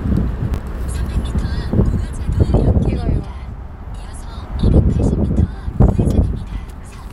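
At 0.54 to 0.58 s, chunks play out of order. One 20 ms chunk arrives a chunk late and swaps places. At 5.82 to 5.9 s, another lands three chunks late. Nothing is missing. Each leaves three hard joins, and the sound briefly jumbles.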